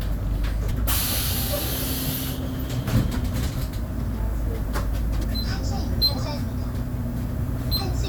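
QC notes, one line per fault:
0.70 s and 5.23–5.25 s, compressed frames skipped: each spot has a short smeared blip, not a hard click, and the sound lurches forward. About 50 ms of material vanishes at the first point and about 70 ms at the second. Those gaps match two and three whole frames, which fits a 23.2 ms frame length. The decoder never played those frames, so the audio jumps ahead. Overlapping neighbouring frames blur the join into that brief smear.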